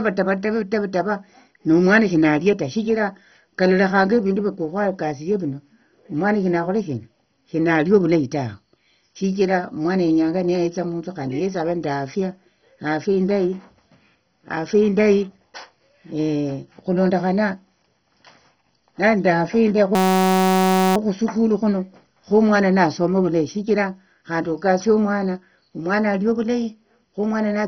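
Across the whole speech recording the sound is dull and gurgling, with a granular, swirly edge, and there is nothing at all above about 6.1 kHz. This is likely heavy MP2 compression, at a rate that points to around 32 kbps. With so few bits, the upper sub-bands are switched off entirely and the remaining ones are coarsely quantised. A spectrogram would show a flat ceiling at 6.1 kHz and patchy, flickering blocks below it as bands drop in and out.

From 19.95 to 20.96 s, the speech gives way to a steady buzz. This is a system hang loop. The playback stalled, and the hardware kept cycling one 5.33 ms fragment of audio, which fits a 256-sample buffer. Repeated at 188 Hz for about a second, the fragment forms a pitched tone rather than a stutter. The waveform shows one identical short cycle tiled end to end. The spectrogram shows evenly spaced horizontal lines at multiples of 188 Hz, starting and stopping abruptly.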